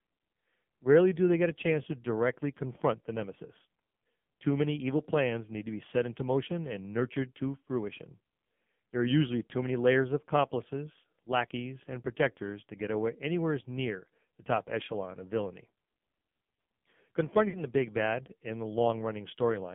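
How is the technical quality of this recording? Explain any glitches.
Technical quality is poor: the whole recording carries heavy mobile-codec damage, and there is one dropout near the end.

The AMR narrowband mobile codec affects the full clip. Content is confined to roughly 150 Hz to 3.4 kHz, so the speech sounds thin and telephone-like with no top end. The codec rebuilds speech from a vocal-tract filter excited by sparse pulses, and at this heavy level of damage, which fits a low AMR-NB mode around 5.9 kbps, the result is buzzy and synthetic.

Lost AMR speech frames occur from 17.50 to 17.63 s, just before "the big bad in". The gap fits two consecutive 20 ms frames, about 40 ms, failing their checks. The decoder filled them by repeating the last good pitch and filter settings at falling gain. The sound briefly stretches, warbles and sags in level, and the speech resumes weak or rough for a moment.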